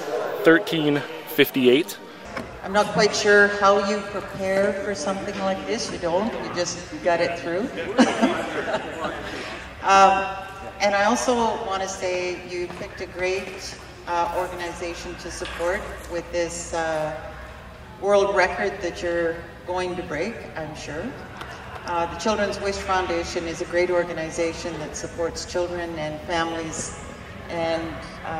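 Nothing here sounds like a technical fault, so there's nothing to flag in this audio.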